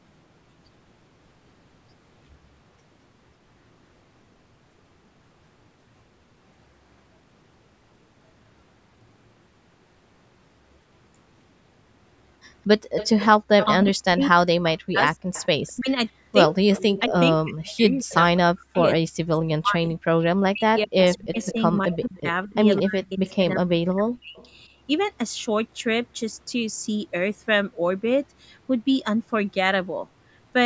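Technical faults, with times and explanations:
12.97–13.86 s, 15.33–17.01 s, 21.04–23.35 s, 24.37–24.48 s, echo leak: a copy of the speech trails by about 204 ms, from about 10 to 35 dB down, likely from a loudspeaker echo the canceller missed.
13.37–13.46 s, background gated by the echo canceller: the room sound drops by about 40 dB for roughly 100 ms as the canceller clamps the microphone, then returns.
13.74–24.42 s, speech suppressed in double talk: the near voice dips sharply, by up to about 40 dB, for about five seconds in total, likely because the canceller attenuated it along with the overlapping far-side talk.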